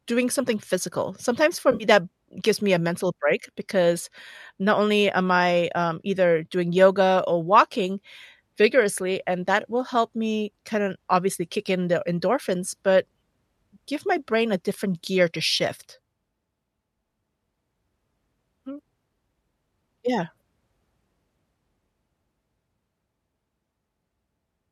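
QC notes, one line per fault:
1.72 to 1.84 s, AAC frame loss with concealment: a brief smeared, noisy and phasey patch in the speech. Roughly 70 ms of audio went missing, broken into a few drop-outs spread over about 80 ms, with the longest gap around 50 ms. That fits several short codec frames being lost. The decoder patched each hole from the last good spectrum. With so little real signal left, it sounds washed-out rather than silent, all within the light coding of what's likely a low-delay AAC-ELD stream at around 64 kbps.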